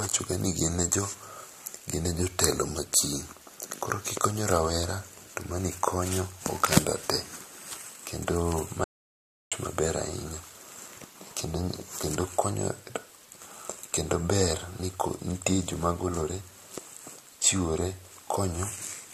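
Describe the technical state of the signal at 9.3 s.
At 9.3 s you're right in the middle of an audio dropout to silence, which runs from 8.84 s to 9.52 s, about 0.67 s in all. The sound cuts off mid-flow and the gap is silent, with not even room tone underneath. That's the signature of the input going missing while the encoder kept writing silence, likely a link failure or momentary disconnect, so whatever was said there is simply gone.

Underneath all of that, the whole clip carries transcoding between lossy codecs. The remaining speech has a layered coarseness: the artefacts of each codec heard together, and a top end that stops at the lowest cut-off in the chain. That combination likely points to an MP3 encode at roughly 64 kbit/s re-encoded to AAC at a similar rate, each stage adding its own damage.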